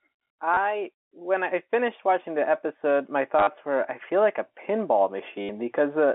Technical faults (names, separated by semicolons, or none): packet loss with last packet repeated